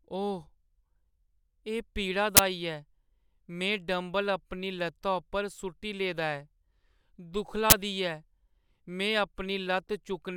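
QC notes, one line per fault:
2.37–2.39 s and 7.70–7.72 s, uninitialised buffer: each time a block of about 21 ms was played before the audio was written, so leftover memory came out as a loud burst of digital noise, which fits a 1024-sample block. A dropout would leave silence, and a click would be a single spike.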